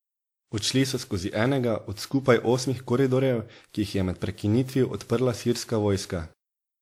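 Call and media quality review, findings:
Generation loss, throughout: swirly, hollow speech with blurred consonant attacks, worse than one 96 kbit/s WMA pass would give. The sound points to about five encodes. Content still reaches 20.1 kHz, so this is not low-bitrate band-limiting. Likely repeated transcoding.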